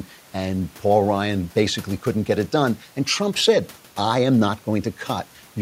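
Nothing stood out on listening to this speech clip, with only a faint room noise sitting about 30 dB below the speech.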